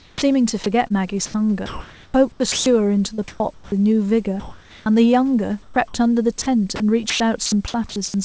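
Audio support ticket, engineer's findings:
Sound dropped by the voice detector, 0.00–0.22 s and 5.62–5.76 s: onset and a short later stretch give way to steady noise. About 80 ms and 50 ms of speech lost. Likely cause is the sender's VAD treating quiet speech as background and halting transmission, with the receiver filling the gap with comfort noise.

Sound chopped by the voice detector, 0.88–3.72 s and 6.42–7.96 s: choppy speech with repeated holes. About 1.1 s and 0.3 s are replaced in total. Likely cause is the VAD toggling between send and stop several times within each stretch.

Comfort noise in place of the background, 4.40–4.86 s: the room's natural background is swapped for flat, featureless hiss at an unchanged level, about 28 dB below the loud speech. Likely cause is a DTX pause, with the receiver synthesising noise to fill it. The G.722 band tops out at 8 kHz throughout.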